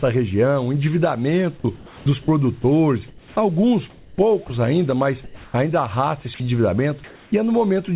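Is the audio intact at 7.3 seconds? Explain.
No. Between 7.04 and 7.32 s, the sender's voice detector likely treated the pause as silence and stopped transmitting, so the receiver filled those 280 ms with comfort noise in place of the background. The real background, sitting about 27 dB below the loud parts, gives way to a steady, featureless hiss with its detail gone. The level barely shifts, about 1 dB, and like the rest of the call it stays band-limited to 4 kHz.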